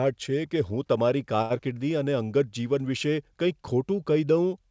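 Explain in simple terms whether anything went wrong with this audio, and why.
Two things go wrong, both right after "કે હું તમારી" and before "અને અંગત જીવન વિશે".

First, at about 1.42 to 1.52 s, there's a short stall from a late packet. A chunk of the call showed up late, and the receiver's waiting buffer ran dry. To cover the gap, it held the last sound for about 80 ms until the packet arrived, then carried on where it left off. Nothing gets lost, but that sound drags a bit too long, with a faint buzzy or dipped quality.

Then, from about 1.58 to 1.74 s, there's a short concealed packet loss. About 20 ms of audio never reached the decoder in time. The receiver patched the hole by extending the sound just before it and blending back into the real audio. What you hear is a quick smear or wobble, and a tiny bit of the sound is simply gone. Throughout, the call codec limits the audio to nothing above about 8 kHz, which is how this kind of call path normally sounds.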